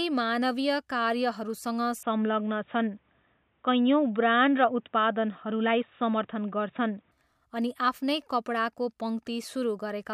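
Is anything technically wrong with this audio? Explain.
Yes. From 2.03 to 7.11 s the speech turns dull and boxy, starting just before "अनि आफ्नै", and it clears up again at 7.11 s. In that stretch nothing comes through above 3.8 kHz. The level shifts by about 5 dB, and a faint new background noise sits well under the speech. Both changes are instant, with no gap. The likely cause is an input switched to a poorer device, such as a headset's call profile, whose narrower band and own noise replaced the original microphone.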